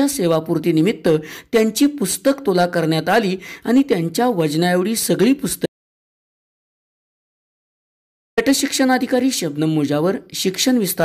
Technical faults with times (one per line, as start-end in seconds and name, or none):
5.66-8.37 audio dropout to silence